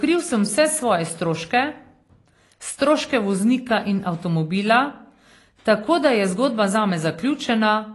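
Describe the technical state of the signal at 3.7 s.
At 3.7 s the speech carries AAC compression damage, present throughout the clip rather than at this moment alone. Nothing is heard above about 11.5 kHz, so the top end sounds dull. The damage is plainly audible, with a smeared, fizzy edge on sibilants. The cause is likely an AAC-LC encoder that quantised the spectrum coarsely and dropped the highest band. That sound fits a low bitrate of around 32 kbps.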